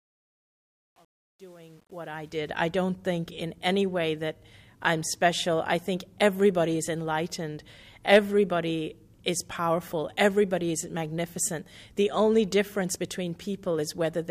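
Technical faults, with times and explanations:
0.00–2.54 s, truncation distortion on a fade: the volume stage applying the fade-in drops low-order bits without dither, and the resolution points to roughly 9 bits. While the gain is very small, the waveform is forced onto a few coarse amplitude steps and becomes blocky and square-edged. The rising sound comes through gritty, worst from 0.00 to 2.22 s.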